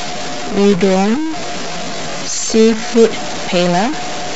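A stuck bit runs through the whole clip, from 0 s to the end: distortion rides on the speech, and the pauses fill with hiss rather than falling silent. The likely cause is one data bit held at a fixed value by a faulty line or converter, so roughly half the samples land off by that bit's weight, and quiet passages toggle it with every sign change.

A time-stretched section covers 0.0 to 3.04 s, where the speech plays at 0.625 times normal pace with its pitch unchanged, sounding dragged, then jumps to normal speed. This is likely software lengthening the audio by repeating short fragments while holding pitch.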